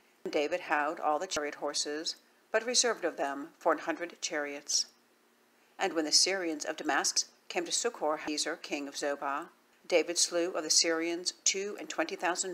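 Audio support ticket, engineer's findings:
Abrupt forward jumps at 0.26, 1.37, 7.17, 8.28 and 9.73 s, no gap. Likely dropped buffer (overrun) in capture. About 0.1 s lost at 0.26, 1.37 and 9.73 s, 0.15 s at 7.17 s, nearly 0.3 s at 8.28 s.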